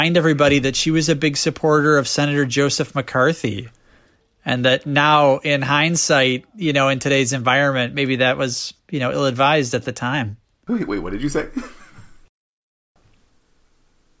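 No technical faults are audible in this speech recording.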